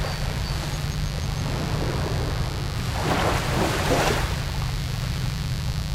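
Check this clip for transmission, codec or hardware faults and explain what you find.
One fault runs through the whole clip: mains buzz. A steady, raspy 50 Hz buzz sits only a little below the sound itself. It comes from sharp switching spikes twice per mains cycle, so harmonics climb into the kilohertz range, unlike a smooth, low-only hum.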